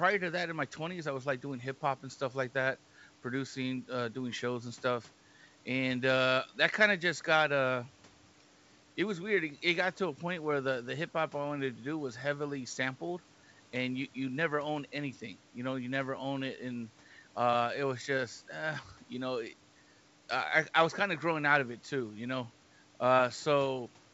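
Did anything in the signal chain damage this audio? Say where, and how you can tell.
No, nothing in the chain has damaged this speech: the room noise sits about 30 dB below the voice, and the G.722 wideband coding at 64 kbit/s leaves at most a faint trace of its band-split processing.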